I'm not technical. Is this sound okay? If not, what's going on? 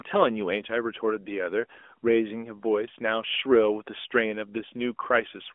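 Yes, no faults here.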